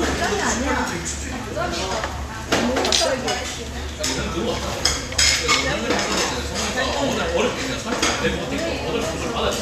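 No technical faults can be heard anywhere in this everyday sound recording, which stays continuous and stable throughout.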